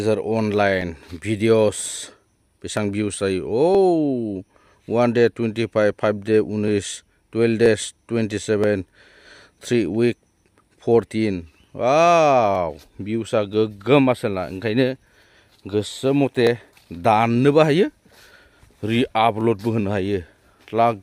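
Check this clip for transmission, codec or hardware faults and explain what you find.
One fault stands out: a regular click recurring roughly every 0.98 s, about twenty times from 0.81 s to 20.38 s, consistent with clock drift buffer slips. The likely cause is two devices on independent clocks differing by around 700 ppm, so the buffer between them drifts until a few dozen samples are dropped or repeated. Packet loss or random dropouts would land at irregular moments. These slips keep a steady, metronomic spacing.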